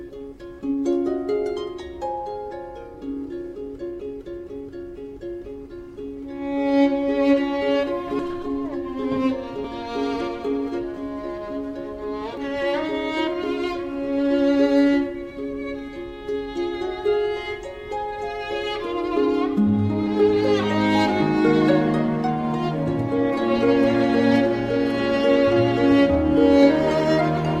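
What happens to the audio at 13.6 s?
Nothing goes wrong at 13.6 s; the audio carries straight through that moment without any dropout, glitch or other audible fault.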